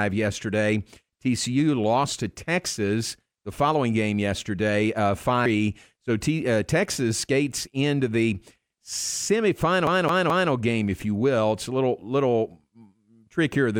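A speech recording with two separate faults. At 5.46 s, just after "following game yesterday uh", there is one brief glitch, damaged data in a compressed stream: the decoder hit corrupted bytes, lost frame sync and resumed at the next header. The result is a single blip, not a repeating pattern. From 9.87 to 10.51 s, just before "game if you will", a CD stuck on one turn replays the same 0.21 s slice three times, each with a tiny mute at the jump. The laser is thrown back one track per revolution, and that even, rhythmic stutter sets it apart from the one-off corruption glitch.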